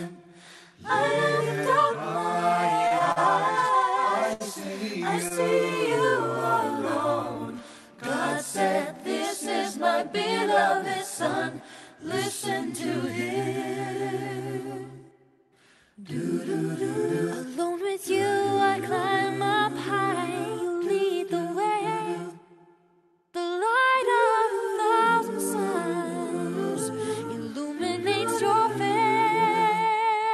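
From 2.87 to 3.18 s there are repeated stalls (stutter). Packets arrived late, and the jitter buffer ran dry three times. The receiver held the last sound through each gap, the longest 41 ms, filling 88 ms in all. Nothing is lost, but the audio drags and catches.

At 4.33 to 4.42 s and again at 5.28 to 5.32 s comes a short stall from a late packet. Each time the buffer emptied, and the receiver stretched the sound, by 68 ms and then 23 ms. The held sound has a faint buzz or dip before playback resumes.

From 23.59 to 24.09 s there is a jitter buffer speed-up. Too much audio had built up in the buffer. The receiver trimmed tiny pitch-period pieces, about 50 ms in total, so playback runs at 110% speed. The pitch stays the same, but the passage sounds hurried.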